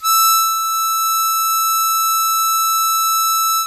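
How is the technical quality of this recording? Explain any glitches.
No technical glitches are audible.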